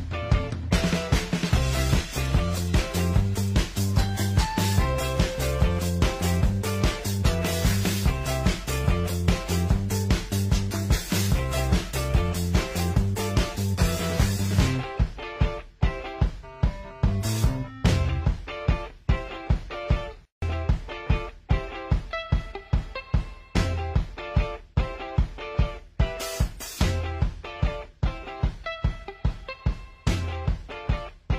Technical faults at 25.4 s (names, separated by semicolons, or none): none